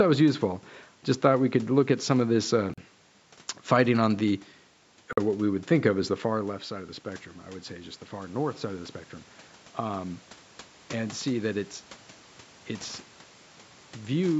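Just after "some of this uh", the sound cuts to silence for 40 ms, from 2.74 to 2.78 s. A 46 ms gap follows from 5.13 to 5.17 s, right before "what we would think". These are likely Bluetooth stalls, where delayed packets let the headphones' buffer run dry until resent ones arrived.

From 6.30 to 9.02 s, following "think of as the", the speech and the room noise behind it swell together by about 4 dB over nearly three seconds. This is automatic gain rising. The level reaching the microphone fell by about 13 dB as the talker moved back around 6 s, and the gain control climbed gradually to compensate.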